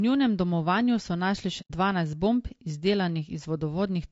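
Throughout the speech the voice sounds rough and grainy, with a hiss sitting between the pitch harmonics and a top band that sounds thin and partly synthetic. This is low-delay AAC compression, likely AAC-ELD at a rate that fits around 32 kbps. Its short frames resolve harmonics poorly and spend bits fast, so the grain stays steady and follows the voice rather than coming and going. That steadiness separates it from intermittent dropouts or from background noise that sits under the speech.

From 1.61 to 1.71 s, after "njunem domovanju so našli" and before "dvanajst bomb", the sound fades down into silence for about 90 ms and then fades back up. This is AAC frame loss with muting. The span points to about three frames whose spectrum the decoder set to zero. The overlapping windows taper the edges, so the gap has soft edges. That tells it apart from a hard dropout or a clipped cut, which start and stop abruptly.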